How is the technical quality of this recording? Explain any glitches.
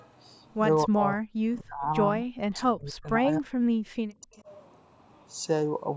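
The recording has two call-processing faults. The speech drops out repeatedly, and a faint echo slips through once.

Speech suppressed in double talk occurs from 0.85 to 1.85 s, 2.21 to 3.59 s and 4.08 to 4.47 s. The speech sinks by roughly 40 dB, sometimes vanishing. The likely cause is an echo canceller turning down both its own talker and the loudspeaker echo while both sides talked.

An echo leak appears from 4.34 to 4.42 s. It is a faint, brief copy delayed by about 274 ms, roughly 30 dB down. The canceller likely missed some loudspeaker pickup.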